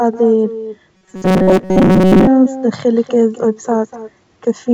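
Throughout the speech, echo with no canceller is present: each phrase returns about 200 ms later at about 15 dB below the original, as a thin shadow picked up from the far loudspeaker. Clock drift between sender and receiver also runs the whole way, with the sender's clock running roughly 3 percent slow, so the receiver's buffer keeps draining. From 0.14 s to 4.72 s, repeated timing corrections stretch the audio to 97 percent speed, adding something like 150 ms in small, unevenly spaced hiccups. From 0.95 s to 2.28 s the sound turns into a rigid, metallic 188 Hz buzz that loosely tracks the speech. This is likely robotic sound from repeated short buffers, with most of that stretch replaced by loops of a fragment about 5.3 ms long. Beneath all this, the call codec path carries nothing above 8 kHz.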